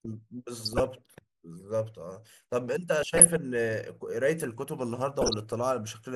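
Throughout the speech there is a dull, gurgling graininess, likely caused by MP2 compression at a low rate, consistent with something around 80 kbps. Layer II divides the signal into 32 sub-bands and, short of bits, drops upper bands and coarsely quantises the rest, so treble flickers in and out. Unlike the clipped, swirly artefacts of transform codecs, this damage is a steady granular roughness tied to band switching, not to pre-echo.

DAB burbling appears at 0.63 to 0.87 s, 3.03 to 3.37 s and 5.21 to 5.52 s. In each burst the speech is overlaid by short blips of noise in single sub-bands as bit errors slip through error correction, at a rate of a small fraction of a percent, and corrupt samples. What separates it from the steady compression damage is that it comes in short bursts of sudden, erratic jumps.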